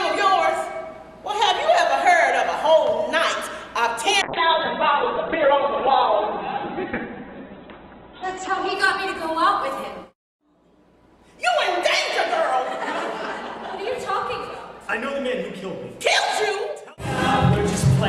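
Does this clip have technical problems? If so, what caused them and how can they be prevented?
Yes, there's a call bitrate drop from 4.22 to 12.31 s. The sound goes coarse and muffled, topping out near 4 kHz instead of 20 kHz, which fits the encoder falling from about 48 to 7 kbps. To prevent it, give the call a steadier connection or keep a higher minimum bitrate.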